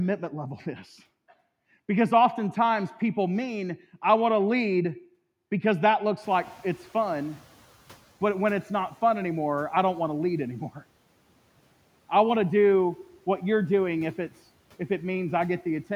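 A speech clip where, right after "to lead because that", the room noise jumps about 22 dB around 6 s and the noise suppressor catches up late. From 6.22 to 8.02 s the noise comes through with less reduction, then sinks about 8 dB as the suppressor's estimate adapts over 1.8 s.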